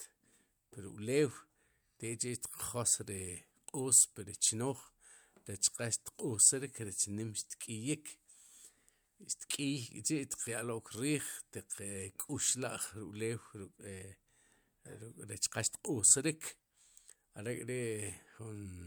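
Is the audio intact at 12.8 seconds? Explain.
Yes, the speech at 12.8 seconds plays through intact, with no dropout, click or other fault at that moment.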